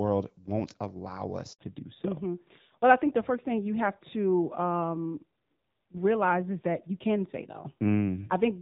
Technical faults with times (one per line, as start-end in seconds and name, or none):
1.53-1.59 handover gap
1.59-8.61 fallback to narrowband